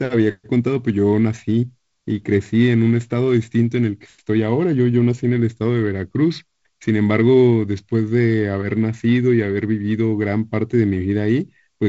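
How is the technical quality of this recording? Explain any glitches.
No glitches can be heard in this speech recording, which has the band-limited sound of G.722 wideband telephone coding at 48 kbit/s, with nothing above 7.7 kHz.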